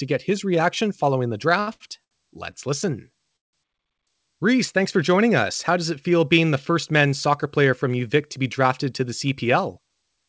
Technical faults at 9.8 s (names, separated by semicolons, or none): jitter buffer speed-up